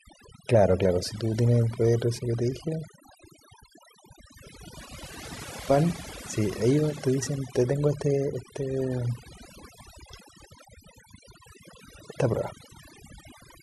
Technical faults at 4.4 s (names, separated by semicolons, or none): overdone noise removal